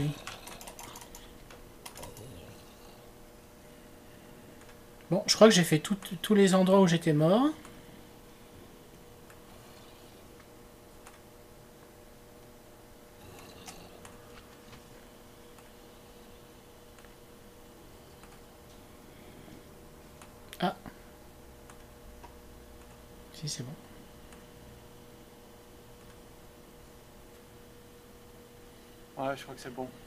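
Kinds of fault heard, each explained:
No technical faults can be heard in this audio. There is nothing here that calls for a fault to be named or explained.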